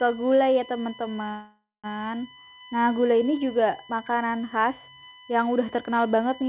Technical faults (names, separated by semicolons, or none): USB whine; call audio freeze